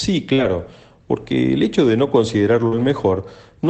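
At 0.33 to 0.40 s the speech shows a short concealed packet loss: about 40 ms never reached the decoder, and the receiver bridged roughly 45 ms by extending the preceding sound before blending back. It is heard as a brief smear rather than a dropout. What sets it apart from the error-correction repair that follows is that the filled stretch carries no new speech content. It is a guess continued from what came before, so a quick sound inside it can simply vanish.

Overlapping it, from 0.38 to 0.44 s, comes a lost packet rebuilt from error correction. About 40 ms, which fits two 20 ms packets, was played from the low-bitrate copies carried in the following packets. The real speech is present and there is no gap, but this stretch sounds rougher and grainier than its surroundings.

The same pairing recurs later. Right after "el hecho de no", a second short concealed packet loss from 2.68 to 2.73 s fills about 35 ms of a 40 ms hole with the same smeared continuation.

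From 2.71 to 2.85 s a longer lost packet rebuilt from error correction follows, covering about 80 ms. That length points to four lost packets. This stretch has the same coarse, noisy texture.

Throughout, the Opus call path sounds consistent with about 24 kbps, with content extending up to 8 kHz.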